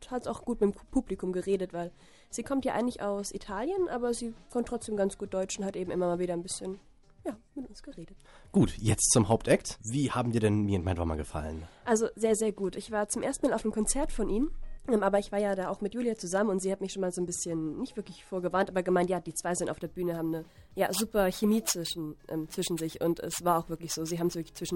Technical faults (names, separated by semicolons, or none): imaging from sample-and-hold upsampling